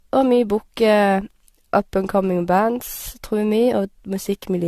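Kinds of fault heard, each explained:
Generation loss, throughout: the speech sounds swirly, smeared and hollow, with blurred attacks and nothing above 14 kHz. This likely comes from about four lossy encodes, each requantising on a shifted frame grid so noise and spectral holes accumulate, consistent with AAC-LC near 64 kbit/s.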